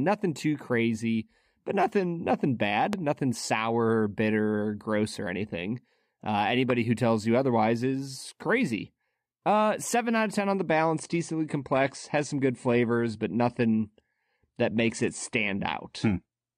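Right after "crazy but nothing nothing" there's a loud pop at 2.93 to 2.95 s, and a second one at 6.70 to 6.72 s, just before "who tells you otherwise". Each is a single sharp crack, standing about 15 dB above the speech, and the talking carries straight on underneath. They're most likely voltage spikes from a plug, switch or static discharge getting into the signal chain and being shaped into a brief click by the circuitry after it.

Then from 10.74 s, right after "of ten on the", through to the end, the quality suddenly drops with no gap in the audio. It sounds like an adaptive stream falling back to a lower bitrate. Everything above 9.8 kHz disappears, so the speech loses its air, and the coding gets rougher. That fits a switch from something like 96 kbit/s AAC down to around 32 kbit/s when the connection slowed.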